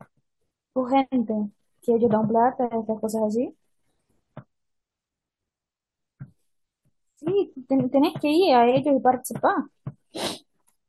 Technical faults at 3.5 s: none

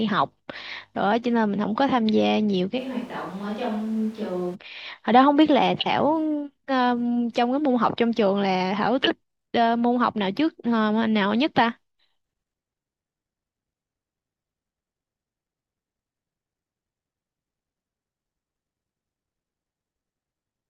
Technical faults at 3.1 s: switch to a distant microphone

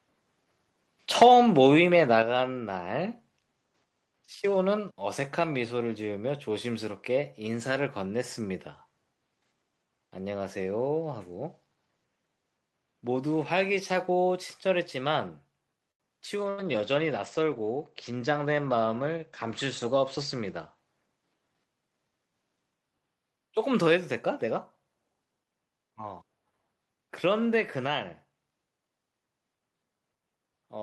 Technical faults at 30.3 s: none

